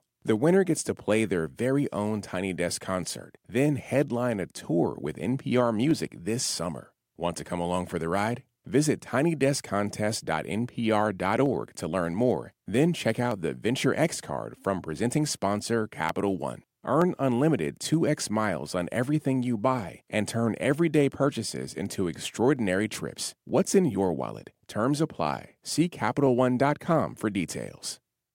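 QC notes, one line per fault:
0.36–28.12 s, clock drift buffer slips: a click recurs about every 0.93 s during the speech, likely from two clocks disagreeing by a few hundred parts per million so roughly fifteen samples slip each time. Unlike random dropouts, the interval never varies.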